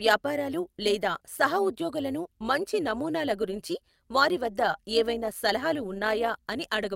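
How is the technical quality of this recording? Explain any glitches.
The recording has a clear technical fault that runs from start to finish: overlap-add ripple. The speech was evidently split into windowed frames and rebuilt with an overlap that does not add up to a steady gain, so the level dips and recovers once per frame, by about 6 dB, at roughly 150 times a second. That gives the speech a metallic, robotic buzz with extra tones around the voice. Unlike a slow tremolo, the wobble is too fast to follow as beats. Unlike mains hum, it follows the speech's own level and disappears in pauses.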